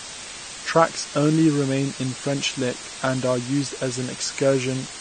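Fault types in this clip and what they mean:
DECT cordless phone buzz: A nearby DECT handset or base sends a short radio burst every 10 ms. The audio circuit rectifies each burst into a small click. At 100 bursts per second these clicks fuse into a thin, steady buzz at 100 Hz with a long string of harmonics. Here it sits roughly 30 dB below the speech. It runs under the whole clip.
Low bit depth with dither: The signal is stored with very few amplitude steps. Noise was added before rounding, so the rounding error turns into even white noise instead of distortion. The hiss here is loud, only about 10 dB under the speech. That level points to roughly 6-bit quantisation. It is constant from start to end and does not follow the speech. There is no grit or crackle, just a flat, heavy hiss.
AAC compression: The speech sounds dull and smeared, with a plainly audible warbling, fizzy texture on sustained sounds and sibilants. 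Nothing is heard above 9 kHz. This points to a low bitrate of around 32 kbps. The likely cause is AAC-LC coding. It splits each frame into 1,024 frequency lines and quantises them coarsely against a hearing model. At a bitrate this low the top band is dropped, and the remaining bands are thinned or patched with noise.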